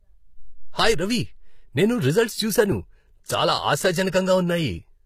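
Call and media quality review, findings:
Speech, whole clip: s sounds gritty and lispy, treble synthetic, nothing above 14.9 kHz. Likely HE-AAC compression. The upper band is rebuilt from copied lower bands, so harmonics misalign across the crossover. Damage plainly audible, consistent with roughly 20 kbps.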